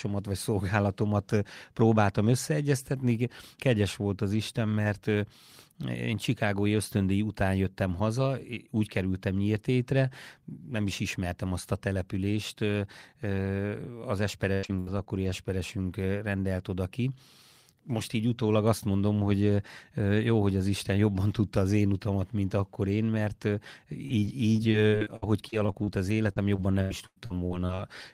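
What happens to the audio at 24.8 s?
At 24.8 s the speech is inside a stretch of repeated packet loss (robotic sound), running from 23.94 to 27.8 s. Missing audio, the longest hole 97 ms, is repeatedly patched by extending the previous sound, giving choppy speech with pieces missing. Spectrograms show smeared, frozen bands; waveforms show repeated chunks.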